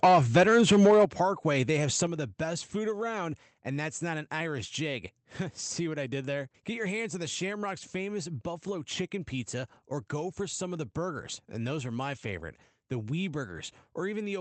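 Right from the start, 0.03 to 1.05 s, the speech has a crackly, squared-off edge on its loud parts. That's microphone overload: the input was likely set too high, so the peaks ran about 7 dB past what the converter could take and got their tops sliced off, with roughly a tenth of the samples flattened. Inside that stretch, at 0.05 s, the level dips by about 2 dB, the first sign of the gain being pulled back.

Those dips are the microphone volume stepped down, likely the call software reacting to the overload by lowering the input gain in single jumps. You hear the speech and the background drop together, abruptly. After the 0.05 s dip, the biggest one lands at 1.05 s, about 8 dB, right as the clipping ends. Another comes at 2.07 s, about 5 dB, between "they have" and "of the best food". That's about 15 dB of drop in total. The whole clip also runs through an Opus call path at 24 kbps, which limits the audio to 8 kHz.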